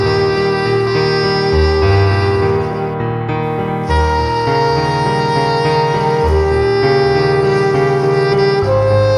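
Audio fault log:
No technical faults can be heard anywhere in the signal.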